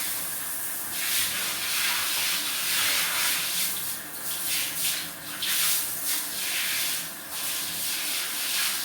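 No technical faults can be heard anywhere in this recording of sounds.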